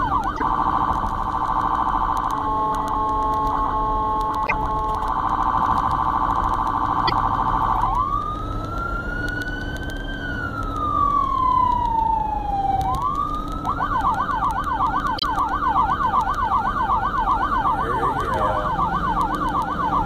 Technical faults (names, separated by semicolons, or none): doubled audio track; broken MP3 bit reservoir